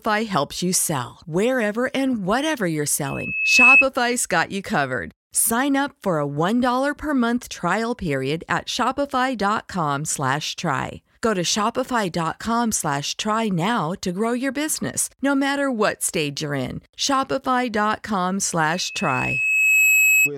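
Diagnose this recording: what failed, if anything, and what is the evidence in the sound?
The acoustic loop between a loudspeaker and the microphone feeding it failed: at 2.6 kHz the loop gain went above one, producing loudspeaker feedback squeal over the speech. From 3.05 to 3.85 s a steady 2.6 kHz tone swells over about half a second to roughly 10 dB above the speech. From 18.70 to 20.3 s the same tone returns, building more slowly over about a second and peaking around 5 dB above the speech.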